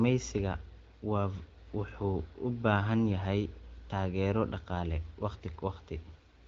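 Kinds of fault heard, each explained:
No faults detected in this speech clip; the AMR-WB path at 12.65 kbit/s shows only the light coding texture expected at that rate.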